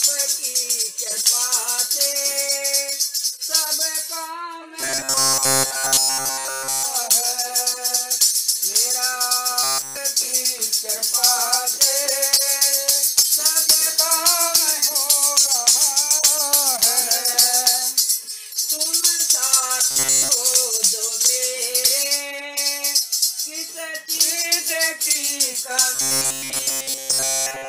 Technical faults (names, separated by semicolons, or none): robotic sound from repeated short buffers